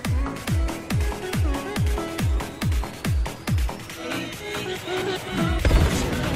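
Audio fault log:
Nothing stood out on listening to the clip.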